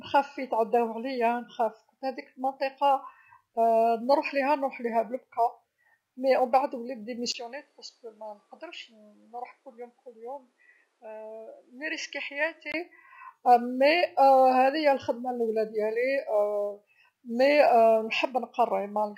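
At 7.32 s a 20 ms gap opens onto duller, noticeably quieter speech with nothing above 13 kHz and a faint new noise floor, until 12.74 s. This is likely an input switched to a poorer device. Unlike a codec bandwidth drop, level and background noise change along with the tone.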